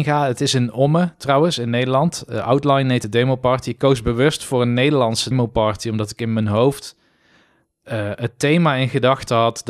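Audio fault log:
3.03 s and 5.31 s, compressed frames skipped: the audio jumps ahead about one frame before "de demo party" and roughly 150 ms before "party omdat ik in".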